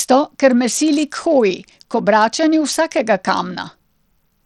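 Throughout the speech, treble flickers and drops out beneath a gritty noise. This is likely Bluetooth SBC compression starving its top sub-bands, consistent with about 80 kbps.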